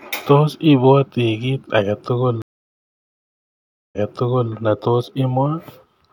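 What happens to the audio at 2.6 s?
The speech cuts out for about 1.5 s and then picks up roughly 0.6 s earlier than where it stopped, repeating a stretch, across 2.42 to 4.53 s. This is a stream reconnect: the connection dropped, the player restarted its decoder, and the server resent recent audio.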